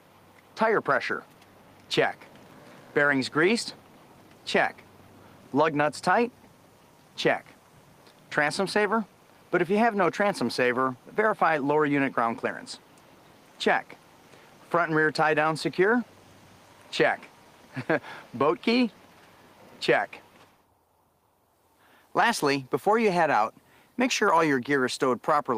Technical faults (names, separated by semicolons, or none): none